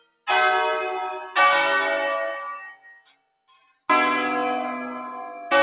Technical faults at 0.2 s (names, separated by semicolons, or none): noise suppressor applied to music or sounds; sound cut by the noise suppressor